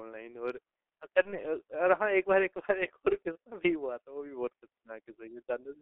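G.723.1 codec damage runs through the whole speech clip. The band is confined to roughly 300 Hz to 3.5 kHz, and the coding is heavy: a low-rate coder that rebuilds the voice from a coarse model refreshed only every 30 ms, consistent with the 6.3 kbit/s mode. Fine detail between updates is lost, so the voice comes across muffled and hoarse, and consonants smear into one another instead of landing crisply.

VoIP packet loss concealed by the speech codec appears at 1.22 to 1.39 s and again at 3.33 to 3.37 s. Each gap matches a single lost 30 ms frame. The decoder filled the hole by carrying its last pitch and filter forward at falling gain, producing a brief, fading smear. At 1.22 s the voice stays weakened well past the gap, to 1.39 s, because each following frame was rebuilt on the guessed one.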